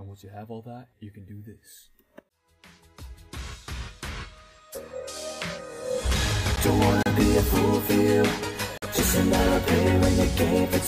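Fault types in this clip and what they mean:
Block of digital silence: At 6.56 s the audio drops to silence for about 11.6 ms and snaps straight back with no fade, so it comes across as a quick tick or dip. The length fits a missed 512-sample buffer.
Bluetooth stall: Two short dropouts to silence, 32 ms at 7.03 s and 46 ms at 8.78 s, before the sound carries on. They're most likely the headphones' buffer running dry while delayed wireless packets were held up and resent.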